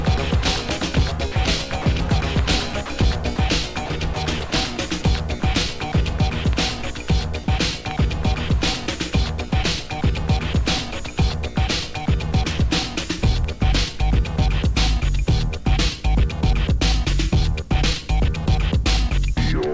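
The audio passed through a call path whose spectrogram is empty above 8 kHz, which fits G.722 at 64 kbps. Two stretches show sound chopped by the voice detector, likely the sender's detector switching transmission off and on repeatedly. Between 1.32 and 1.86 s about 80 ms of sound is lost, and between 2.86 and 5.42 s about 180 ms, each replaced by comfort noise. On a spectrogram these look like brief, uneven patches where the sound's energy gives way to flat, featureless noise. In the waveform the envelope collapses several times to a low, even floor. The clip also has sound dropped by the voice detector, likely from the detector treating quiet sound as background and stopping transmission. This happens at 7.44 to 7.48 s, losing 40 ms, and at 9.50 to 9.52 s, losing about 10 ms. In both places comfort noise fills the gap, showing as a thin band of uniform noise in the spectrogram and a short flat dip in the waveform before the sound resumes.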